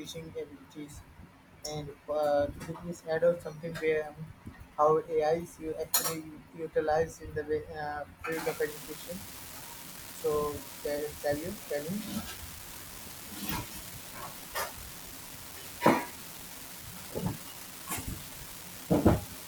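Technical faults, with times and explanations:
8.32 to 19.48 s, unreliable data bit: one marginal data line flips at random. Each error adds a fixed spike of about −32 dBFS, heard as steady crackle, even in pauses.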